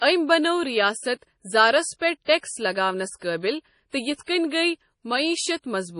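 MP3 compression runs through the whole of this speech clip. Nothing survives above 10.6 kHz, and heavy codec damage leaves the sound watery and swirly as weak frequency lines drop in and out between frames. It is likely caused by an MP3 encode at a bitrate as low as 32 kbps. Pre-echo appears at 1.99 to 2.01 s, just after "بنٲو ریاست زارس", at 2.25 to 2.28 s, and at 2.39 to 2.43 s, just before "لگاونَس قٲبِل". Each time, the quantisation noise meant for a sharp onset spreads into the quiet instant before it, so a brief hiss of 26 to 44 ms comes ahead of a softened attack.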